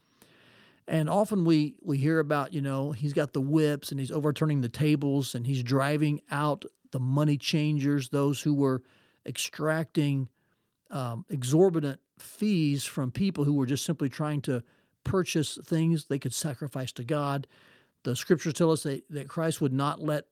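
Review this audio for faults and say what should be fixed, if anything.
Nothing needs fixing: the speech signal shows no technical faults, so no corrective work is called for.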